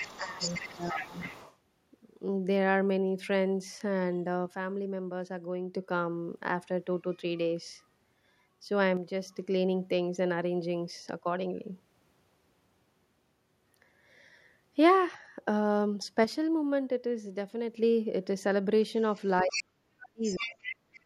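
From 0.0 to 1.56 s the other side's voice leaks through, a second voice sitting about 10 dB under the speech. The likely cause is the echo canceller leaving loudspeaker pickup in the microphone signal. Unlike a crosstalk hum, it is clearly another talker.

Overlapping that, from 0.17 to 1.2 s, the main speech is suppressed in double talk. It dips by up to roughly 15 dB while the other side speaks, likely because the canceller turned down both voices at once. It tracks the overlap rather than holding a steady level.

From 4.46 to 5.74 s, 8.97 to 9.39 s and 16.24 to 17.77 s, one channel drops out. The whole sound falls abruptly by 6 dB and recovers just as abruptly, which points to a likely loss of one stereo channel before the mono sum. It differs from double-talk suppression because it is a clean, fixed step across all frequencies, with no second voice involved.

Near the end the echo problems return together. 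Suppression in double talk cuts the speech by as much as about 40 dB from 19.44 to 20.22 s and again from 20.4 s to the end. Scraps of the other side's voice leak through at 19.51–19.64 s (about 5 dB below the speech), 20.24–20.76 s (about 10 dB below) and 20.94–21.0 s (much fainter, about 25 dB down).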